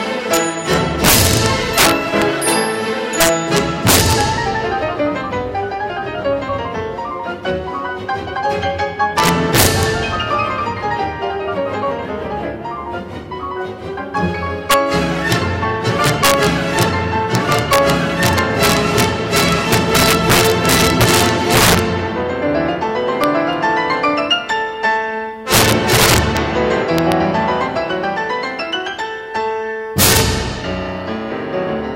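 Throughout, integer overflow: gain pushed about 8 dB past the integer limit wraps peaks to the opposite sign, so roughly half a percent of samples burst into violent cracks.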